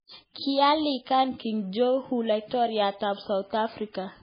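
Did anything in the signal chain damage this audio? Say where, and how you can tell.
Yes. The damage sits at the codec stage and runs through the whole speech clip. The likely cause is heavy MP3 compression at a very low bitrate, which fits something around 16 kbps. Starved of bits, the encoder cuts the treble completely, so nothing is left above 5 kHz. It also drops weak frequency lines that flicker on and off between frames. That gives the speech a watery, swirling texture, with sibilants and consonant attacks smeared and metallic.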